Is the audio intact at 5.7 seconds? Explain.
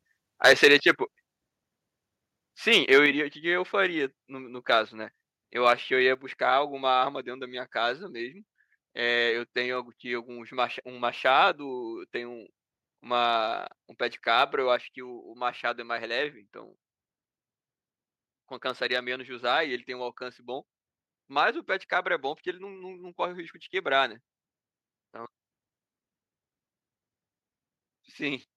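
No, microphone overload is audible from 5.66 to 5.72 s, likely from input gain driving peaks about 2 dB past the converter's limit: a harsh crackle, with flat-topped waveform peaks and vertical broadband streaks on a spectrogram.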